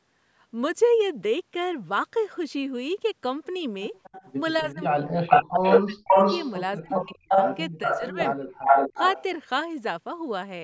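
From 4.03 to 4.61 s a faint, delayed copy of the speech trails about 245 ms behind it, well below the main level. This is echo leak, likely from a far end on a loudspeaker whose echo canceller let some of its microphone pickup return down the line. From 5.31 to 6.53 s, 6.91 to 8.29 s and 8.61 to 9.23 s the echo comes back at a longer 391 ms delay, now as loud as or louder than the speech it copies.

Between 4.62 and 6.23 s the speech dips deeply and breaks up, for about a second in total. This is speech suppressed in double talk. With both sides active at once, the canceller likely couldn't tell its own talker from the returning echo and turned both down. The same happens from 6.79 to 7.36 s and from 7.84 to 8.56 s. These drops are nearly as deep and are heard as shorter gaps while the echo runs over them.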